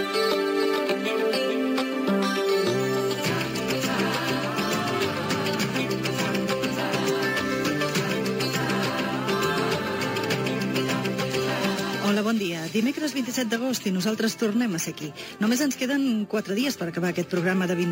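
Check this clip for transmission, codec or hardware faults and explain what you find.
A bright, metallic fizz sits on top of the sound for the whole clip, rising and falling with the level of the material and lying about 20 dB below it. This is imaging from sample-and-hold upsampling. The audio points to an original rate near 22 kHz that was raised to 48 kHz by repeating each sample without a smoothing filter. This leaves mirrored spectral copies, the lowest spanning roughly 11 kHz to 22 kHz and moving opposite to pitch.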